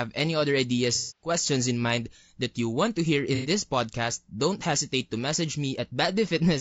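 Throughout, the speech sounds rough and grainy, with noise filling the gaps between harmonics and a thin, synthetic top band. This points to low-delay AAC compression, likely AAC-ELD at around 32 kbps, whose short frames resolve pitch poorly. A spectrogram shows smeared harmonics and hazy upper bands.

From 0.95 to 1.30 s, after "any other" and before "in mind that you", AAC frame loss with concealment replaces about 240 ms of sound, which fits eight lost frames. The decoder rebuilt the audio from the last good spectrum, so this patch sounds smeared and noisy. A second loss from 3.35 to 3.49 s, between "you want to hear" and "podcast don't", is shorter at 90 ms. On a spectrogram, both show blurred, structureless energy where the harmonics disappear.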